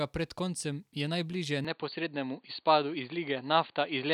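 Speech. At 1.65 s, after "koncem je najbliže", the sound turns dull until the end. Nothing passes above 4.6 kHz. Likely an input switched to a poorer device, with no gap, unchanged level and faint new noise.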